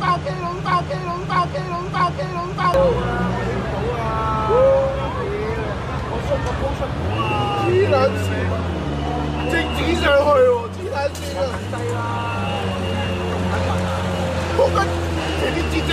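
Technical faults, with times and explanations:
0.00–2.74 s, broken-record loop: already under way when the clip opens, a 0.64 s fragment repeats exactly three times, back to back, likely because the player or stream stalled and resent its last buffer; the waveform and spectrogram show identical blocks tiled edge to edge, and the audio meant for that span is lost.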